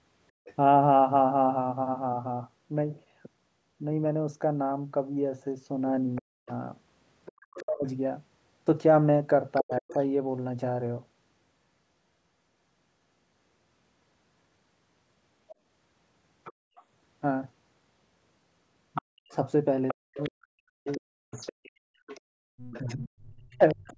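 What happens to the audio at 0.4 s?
From 0.32 to 0.45 s the background is gated by the echo canceller: it clamps the microphone down by about 37 dB while the loudspeaker plays, so the room sound ducks and then recovers, unlike a packet dropout's abrupt hole. Right after, from 0.45 to 0.54 s, the other side's voice is leaking through, faint at about 25 dB below the speech, likely because the canceller let residual loudspeaker sound pass. It is a separate talker, not a reverberant tail.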